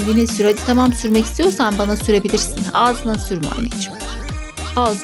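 From 0 to 2.18 s the resampler restarted on every 20 ms block, leaving an error at each edge, heard as a 50 Hz buzz beneath the sound.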